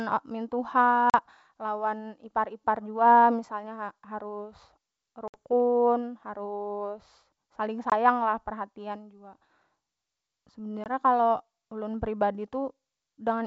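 At 1.10 to 1.15 s, 5.28 to 5.37 s, 7.90 to 7.93 s and 10.84 to 10.87 s there is packet loss on an ADPCM call. Holes of 40, 60, 20 and 20 ms cut in with hard edges. Each is bridged with silence. The decoder's predictor and step size lose track of the sender. So the speech returns with brief, slight distortion. The G.722 wideband coding stays clear to 7 kHz.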